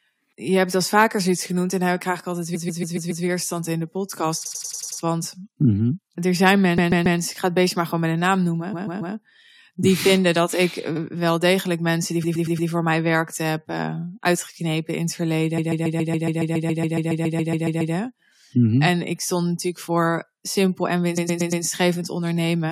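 Repeated frames stutter the speech at 2.54, 4.45 (after "in de podcast"), 6.77, 8.72, 10.95, 12.23 (after "wel degelijk mensen die"), 15.57 and 21.17 s. A block of 70 to 139 ms replays up to 17 extra times. The longest, after "uitgeknepen in het", adds 2.37 s.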